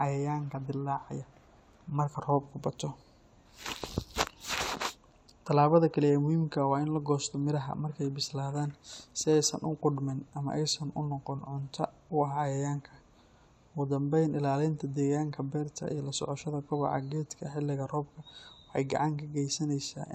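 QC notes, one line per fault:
Nothing stood out on listening to the speech.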